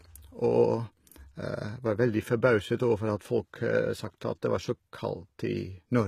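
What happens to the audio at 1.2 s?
The speech at 1.2 s carries damage that runs through the whole clip. The treble sounds synthetic: s sounds come out gritty and metallic, and the top of the spectrum stops dead at about 14.9 kHz. The likely cause is HE-AAC compression at a low rate, which fits a bitrate around 20 kbps. Only the lower band is truly coded. The upper band is copied up from below and shaped coarsely, so its harmonics do not line up.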